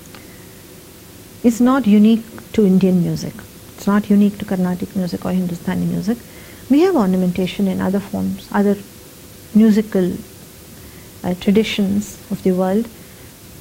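From start to end, low bit depth with dither: only 7 bits, dither-smoothed rounding. Result is a constant, even hiss about 25 dB below the sound, without distortion.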